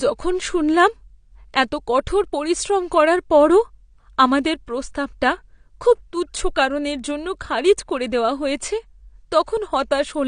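AAC compression runs through the whole speech clip. The sound is dull and smeared, with nothing above 9.7 kHz, and the codec damage is plainly audible as a warbling, fizzy texture on sustained sounds and sibilants. The likely cause is AAC-LC encoding at a low bitrate, which fits roughly 32 kbps. At that rate the encoder lowers its cut-off and quantises the remaining frequency lines coarsely against its hearing model, so fine detail is lost or thinned.

Pre-echo occurs at 4.44 s, just before "প্রস্তাবটা খুব তুচ্ছ কারণের". A short hiss lasting about 11 ms leads into the attack, and the onset sounds softened rather than crisp. The transform codec spreads its quantisation noise evenly over each block. When a sharp attack lands late in a block, the noise sized for the loud part also fills the quiet moment just before it, so the hiss arrives ahead of the attack.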